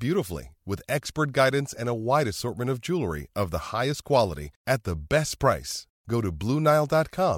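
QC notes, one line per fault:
No faults heard in this clip.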